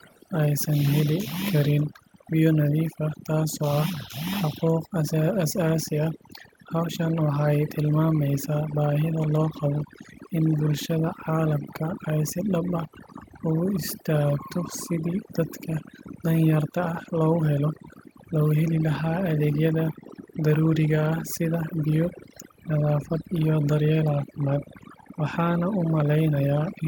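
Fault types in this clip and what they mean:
overdone noise removal: Throughout the speech, a noise reducer pushed too hard has carved out every frequency band it judged to be near the noise floor, so the background drops to near silence dotted with twinkling specks, and the quieter parts of the voice are stripped away with it. Unlike plain low-level hiss or a steady muffling filter, the damage flickers band by band and changes from moment to moment with the signal.
echo leak: In the first 0.2 s there is a faint delayed copy of the voice, very quiet, well below the direct speech, arriving about 357 ms late. That points to a far end playing the call over a loudspeaker, with its echo canceller likely leaving a residue that was sent back. Room reverberation would smear the sound continuously, but this is a discrete repeat at a fixed lag.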